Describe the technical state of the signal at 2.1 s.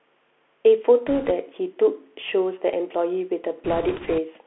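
Bluetooth CVSD headset codec damage is present at 2.1 s and runs through the whole clip. Each sample is coded as one up-or-down bit with an adapting step, which fits a 64 kbps stream. The speech sits in a narrow 300 Hz to 3.4 kHz band, loud high sounds outrun the step and distort, s sounds turn scratchy, and a granular hiss lies underneath.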